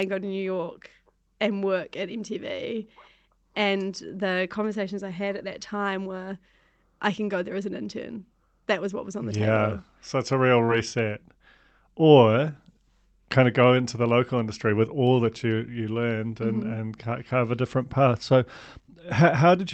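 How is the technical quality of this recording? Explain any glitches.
One glitch stands out, on a call path whose sound stops at about 8 kHz. At 10.65 to 10.70 s, just after "it's a real", there is short concealed packet loss. About 20 ms of audio never arrived in time. The receiver stretched the preceding sound across the gap, then blended back into the real signal. It is heard as a brief smear.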